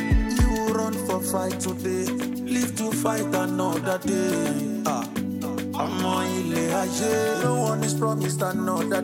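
No faults turn up anywhere in the recording.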